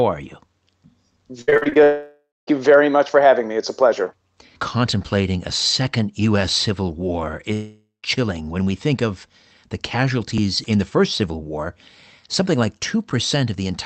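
Repeated packet loss (robotic sound) hits this speech clip from 1.41 to 1.77 s: seven short holes, the longest about 61 ms, with roughly 200 ms of audio missing. Each hole is patched by stretching the preceding sound, so more than half of that span is synthetic, giving a choppy, robotic texture with fragments gone. A long network dropout follows from 1.83 to 2.49 s, just before "you very much for," and another runs from 7.53 to 8.05 s, just before "chilling when we think." In each, the last sound is carried on as a fading buzz that then turns to silence for about 0.2 s and 0.14 s respectively. When the speech resumes, roughly 0.64 s and 0.5 s of it are simply absent, likely because no audio arrived from the network for those stretches. All of this sits on a call codec path that fits Opus at about 24 kbps, with high frequencies cut off above 8 kHz.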